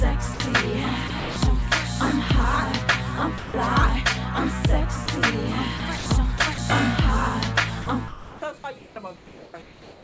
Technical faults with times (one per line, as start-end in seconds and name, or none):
0.34-0.40 sound dropped by the voice detector
1.08-1.36 sound chopped by the voice detector
3.38-3.54 sound dropped by the voice detector
5.06 sound dropped by the voice detector
5.78-6.06 sound chopped by the voice detector
6.38-6.58 sound chopped by the voice detector
7.82-8.42 sound chopped by the voice detector
8.78-10.03 comfort noise in place of the background